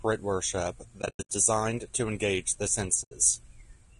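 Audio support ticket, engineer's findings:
Rough, grainy speech throughout, noise filling the gaps between harmonics, top band thin and synthetic-sounding. Codec damage plainly audible. Likely cause: low-delay AAC compression (AAC-ELD). Short frames resolve pitch harmonics poorly and eat bits. The grain points to a low bitrate, around 32 kbps.

1.01 to 1.30 s: sound drops out in soft-faded gaps, about 220 ms missing, scattered over 280 ms, longest gap around a tenth of a second. AAC frame loss with muting. Decoder zeroes lost frames, and the overlapping windows fade each edge.

3.03 to 3.12 s: single soft-edged hole, about 80 ms. Same AAC frame loss with muting, fitting four consecutive 20 ms frames lost.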